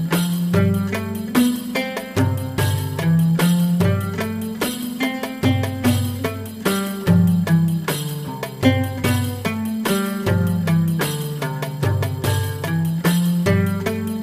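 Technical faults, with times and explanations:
8.27–8.29 s and 10.99 s, damaged data in a compressed stream: brief glitches where corrupted frame data is misread, so the decoder loses sync and hunts for the next frame header.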